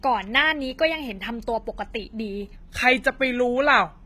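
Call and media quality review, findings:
Low-bitrate audio saved at a high bitrate, full clip: dull, smeary top end with no content above 14.9 kHz. Spectrogram shows a hard flat ceiling at 14.9 kHz and blurred, patchy high bands. Likely cause is an earlier low-bitrate encode, fitting something like HE-AAC near 20 kbit/s, then a re-encode to MP3 around 192 kbit/s. The second pass keeps the first pass's losses and does not restore them.

Section at the wrong speed, 2.56 s to end: audio slows to 0.875× and drops about two semitones, sounding deeper and dragged. Waveform shows syllable envelopes stretched about 14% longer. Spectrogram shows harmonic stacks stepping down and packing closer from 2.56 s. Likely cause is a player or edit stage resampling this segment against the wrong clock.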